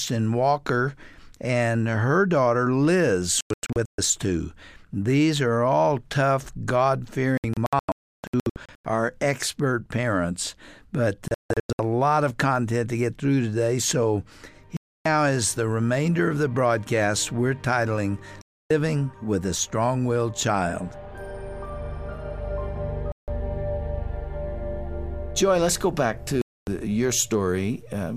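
Digital broadcast dropout recurs seven times, at 3.41–3.99 s, 7.38–8.85 s, 11.28–11.80 s, 14.77–15.06 s, 18.42–18.71 s, 23.12–23.28 s and 26.42–26.68 s. The receiver lost valid frames and muted until clean data returned, so the sound cuts abruptly to silence. In the first three events the gaps are broken up, totalling 384 ms, 896 ms and 384 ms across up to 1.5 s, with the longest single hole 320 ms. The later events are single gaps of 160 to 288 ms. The programme material during each hole is gone.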